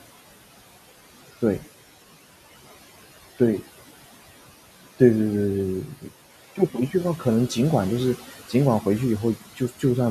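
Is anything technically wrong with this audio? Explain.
Yes, there are two related problems. Noise suppressor artifacts run through the whole speech clip. The suppressor is pulling the room noise, which sits about 17 dB under the voice, down by roughly 15 dB in each frequency band it judges to be steady noise, frame by frame. So the background dips in the gaps and comes back up under the words.

Then there's speech cut by the noise suppressor between 9.36 and 9.84 s. The suppressor mistakes part of the quiet speech for background and turns it down by as much as about 14 dB. Across roughly a fifth of a second in total, those sounds come out swallowed and faint.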